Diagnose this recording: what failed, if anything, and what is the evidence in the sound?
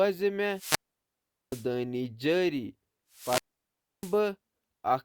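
Twice the analogue radio link faded, giving a wireless microphone squelch dropout. From 0.52 to 1.69 s and again from 3.11 to 4.21 s, hiss swells, then near silence holds for 0.77 s and 0.65 s while the receiver's squelch mutes the weakening FM signal.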